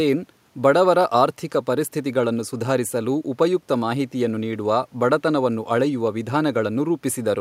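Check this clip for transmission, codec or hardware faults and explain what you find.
No transmission, codec or hardware faults are audible in the speech; the only background is room noise sitting about 43 dB below it, which belongs to the recording itself.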